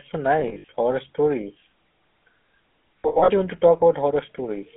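The whole recording passed through the GSM full-rate codec. It models the vocal tract and excites it with a sparse, regularly spaced pulse train, which fits 13 kbps. Everything sits in a telephone band from about 250 Hz to 3.4 kHz, so the speech sounds thin and boxed. The coarse excitation leaves a plainly audible buzzy, gravelly roughness on every voiced stretch.

Lost GSM frames hit twice. From 0.40 to 0.68 s, the decoder lost frames in scattered gaps, about 160 ms in all, which points to eight frames. The longest run was around 70 ms. At each gap it reused the last good frame's settings, so the sound catches on a rough, metallic ring before the speech resumes. The same happens from 3.02 to 3.30 s, just before "do you want to", with about 200 ms missing, likely ten frames, and the same ringing stutter.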